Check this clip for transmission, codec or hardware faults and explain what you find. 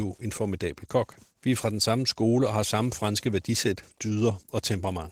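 One codec fault runs through the whole clip: Opus voice compression at a low bitrate, with plainly audible damage. The encoder appears to be running in its hybrid mode, with SILK's linear-prediction coding handling the lower band and a CELT layer covering the top, at a rate that points to around 16 kbps. With so few bits, the excitation is quantised coarsely, so the speech sounds hoarse and slightly robotic even though the full bandwidth is kept.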